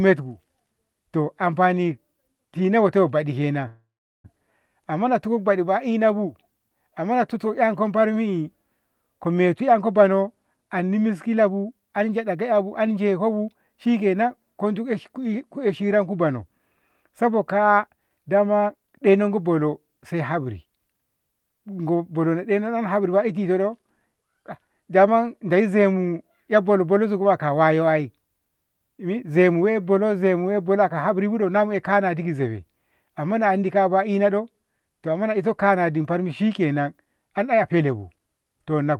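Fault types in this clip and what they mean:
call audio freeze: Delayed packets likely left the jitter buffer empty, so from 3.67 to 4.26 s the last sound is stretched into a fading buzz that drops to silence for its final 0.38 s. Then the audio resumes where it stopped, now running about 0.57 s late.
jitter buffer speed-up: With too much audio queued, the receiver repeatedly removed tiny pitch-period slices. The sound hurries at unchanged pitch: 110% speed at 9.60 to 10.10 s and 11.41 to 13.69 s, then 118% at 17.87 to 19.38 s, just before "bono sai haburi".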